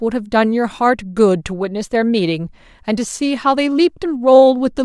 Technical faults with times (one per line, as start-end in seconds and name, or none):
none